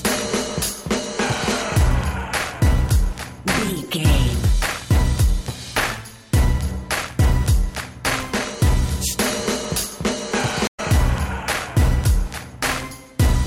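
At 10.67 s the audio drops into a gap of 82 ms and picks up again by 10.80 s, a stream reconnect: the connection broke, playback went silent, and a freshly started decoder rejoined the stream mid-flow. The resumed audio lands slightly ahead, skipping roughly 70 ms of material. On a waveform this shows as a flat stretch followed by the signal fading back in; a spectrogram shows a blank vertical band with mismatched content on either side.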